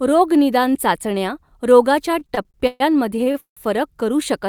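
From 2.11 s to 3.60 s the speech has repeated stalls (stutter): twelve gaps where late packets emptied the jitter buffer and the last sound was held, fading in the longest, 166 ms. About a third of that span (492 ms) is filler, so the speech drags without losing content.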